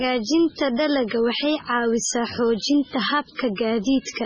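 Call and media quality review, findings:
MP3 compression, whole clip: watery, swirly speech, s sounds chirpy and metallic, consonant attacks smeared, nothing above 10.2 kHz. Likely an MP3 encoder starved for bits, which fits a very low rate around 16 kbps. Weak frequency lines flicker between frames, and the treble is cut hard.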